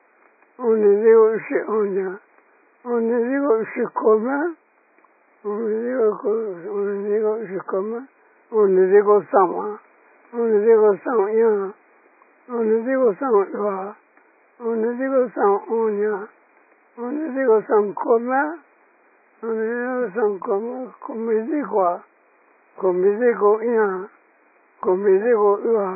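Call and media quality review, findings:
AAC compression throughout. Dull, band-limited sound, nothing above 2.5 kHz. Heavy smearing and a warbling texture. Likely an AAC-LC encoder starved of bits, fitting roughly 12 kbps. Lowered cut-off and coarse quantisation. Room noise sits about 36 dB below speech.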